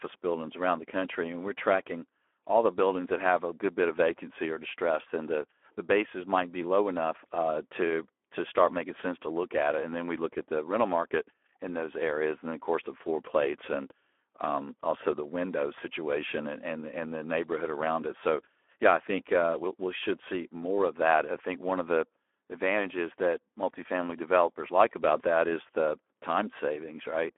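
Speex codec damage runs throughout: a starved CELP excitation makes the speech hoarse and noisy, with a band that fits a telephone line and nothing above 3.8 kHz, consistent with roughly 11 kbps.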